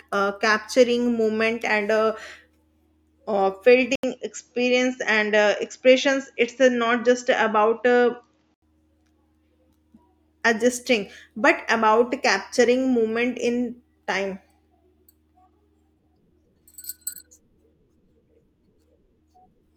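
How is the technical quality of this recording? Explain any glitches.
The recording has one clear glitch, a temporary drop in fidelity. From 3.95 s to 8.62 s the speech turns duller, with nothing above 7.6 kHz, and an 80 ms gap of silence marks the switch. The likely cause is the input switched to a poorer device: the system moved to a narrower-band microphone path mid-recording. Loudness stays about the same, but a faint new noise floor appears roughly 50 dB below the speech before the full bandwidth returns.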